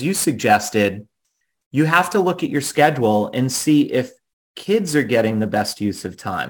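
Throughout, a fine hiss roughens the speech, strongest on loud, bright sounds: sample clock jitter of several microseconds, with errors roughly 25 dB down.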